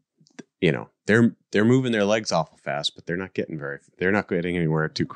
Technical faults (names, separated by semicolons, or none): none